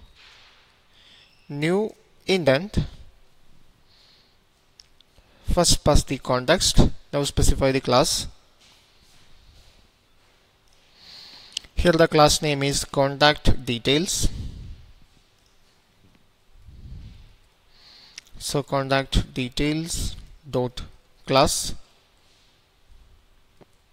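No technical faults can be heard anywhere in this clip. There is nothing in the audio to mark at any point.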